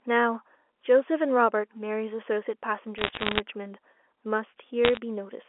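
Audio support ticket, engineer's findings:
Bit errors on a digital phone line: crackle and sharp ticks over the speech at 2.98 to 3.40 s and again at 4.85 to 4.98 s. Flipped bits in the 8-bit mu-law samples, error rate about 0.7% and 0.5%. Line band itself sounds normal telephone, roughly 300 Hz to 3.4 kHz.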